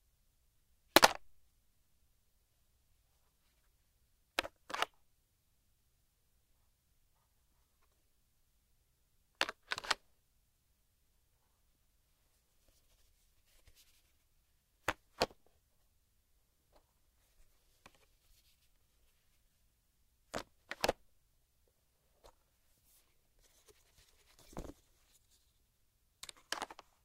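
No technical faults can be heard in this sound.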